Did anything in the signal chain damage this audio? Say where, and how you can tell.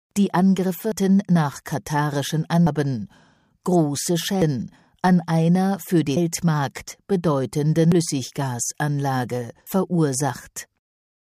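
Yes. There are abrupt skips at 0.92, 2.67, 4.42, 7.92 and 9.67 s. At each one, about a third of a second of sound is gone and the two sides butt together with no silence. This is likely audio missing between chunks at the recorder's buffer stage, with a short piece dropped each time one roughly 2-second chunk closes and the next opens. Network packet loss would leave short, irregular or smoothed-over gaps. These are clean splices at a steady spacing.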